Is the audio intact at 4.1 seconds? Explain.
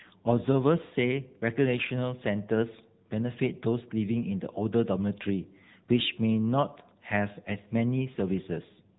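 No. At 4.1 seconds the speech carries AMR narrowband mobile codec damage, present throughout. Nothing above 3.8 kHz survives. The codec rebuilds the voice from a vocal-tract model and sparse pulses, so it sounds buzzy and synthetic, which fits a low rate near 8 kbps.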